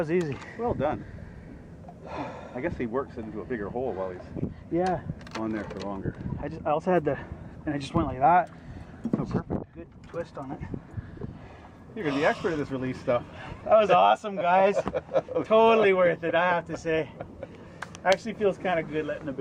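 No technical faults are audible.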